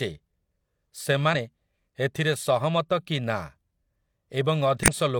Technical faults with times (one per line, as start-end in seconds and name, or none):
1.30-1.35 damaged data in a compressed stream
4.83-4.89 damaged data in a compressed stream